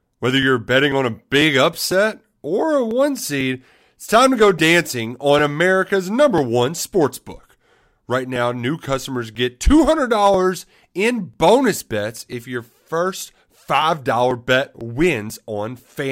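From 0.43 s to 15.8 s, a small tick breaks into the speech every 0.496 s. These are periodic USB or driver dropouts: something stalls the audio path at that fixed interval, and a few milliseconds of sound are skipped each time.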